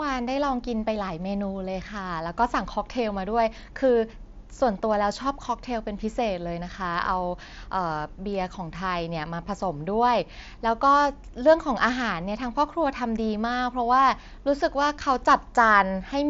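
No faults are audible in this speech; the only processing heard is the Bluetooth mSBC headset codec, whose band stops near 7.7 kHz.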